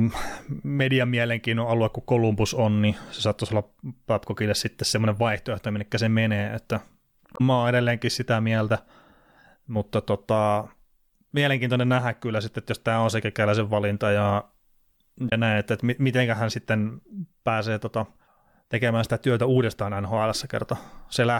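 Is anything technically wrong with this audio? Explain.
Yes. Damaged data in a compressed stream occurs twice: 7.33 to 7.41 s, between "minne se menee että" and "mä oon edelleenkin sitä", and 15.26 to 15.32 s, just before "näin että että miten". Corrupted bytes made the decoder misread or drop frames and lose sync until the next valid frame header, briefly breaking the speech.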